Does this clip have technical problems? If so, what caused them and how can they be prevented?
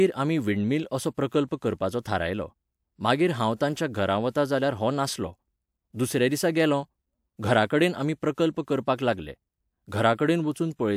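No, there are no technical problems to hear in this speech clip. Nothing here calls for a fix or a preventive step.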